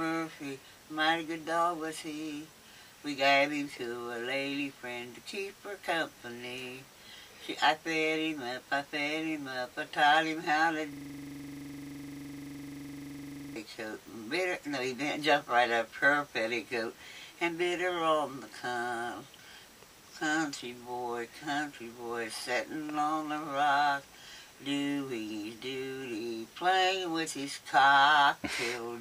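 From 10.93 to 13.56 s, a system hang loop sets in. Playback froze while the hardware kept replaying one 42.67 ms block, which fits a 2048-sample buffer. Repeating at 23.4 Hz, it makes a rattling stutter, and unlike random glitching, every cycle is identical.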